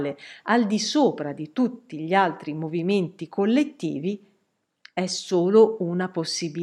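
No technical faults are audible in this speech.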